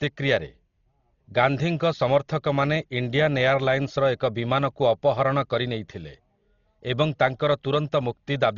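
Heavy Dolby Digital compression damage runs throughout the speech. Nothing is heard above 6.9 kHz, so the sound is dull. The likely cause is an AC-3 style encoder starved of bits, which fits a rate near 32 kbps. It narrowed the band and left many frequency lines with no real data, so the decoder filled them with noise. That filler gives a rough, fluttering grain around tonal parts of the speech.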